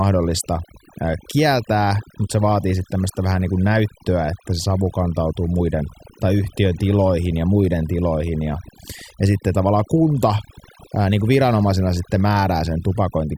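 Throughout the speech, the background sinks away and breaks up into twinkling, warbling specks, and quieter parts of the voice vanish along with it. This is overdone noise removal: a reducer set too strong cuts every frequency band close to its noise estimate.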